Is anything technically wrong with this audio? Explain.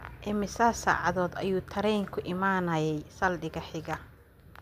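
No, nothing here stands out as technically wrong; it's a speech recording with no audible faults to point to.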